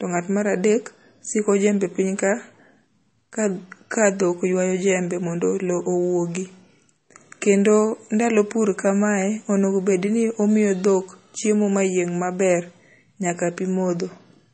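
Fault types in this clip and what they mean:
MP3 compression: The band-limited, watery character of this speech is likely the result of MP3 encoding at a low bitrate, with damage plainly audible throughout. Nothing is present above 8.4 kHz, where the encoder has cut the treble to save bits, which fits a rate around 32 kbps. Below that, weak frequency lines drop in and out between frames, giving a swirly texture, metallic chirps on s sounds, and softened attacks on consonants.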